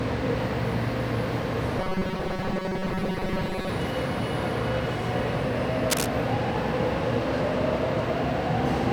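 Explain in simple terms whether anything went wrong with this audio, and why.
From 1.79 to 3.69 s the sound turns into a stiff, metallic buzz pitched at 188 Hz. This is robotic sound from repeated short buffers, likely caused by audio arriving too slowly, so tiny 5 ms pieces were looped while most of the real sound was skipped.

From 5.90 to 6.06 s there is a brief scratchy rustle, roughly as loud as the sound itself. This is cable scratch noise, likely from a worn cable or connector being moved, making the electrical contact flicker.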